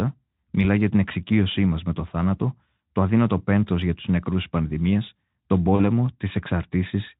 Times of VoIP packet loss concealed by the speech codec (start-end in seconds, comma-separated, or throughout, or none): 5.75-5.83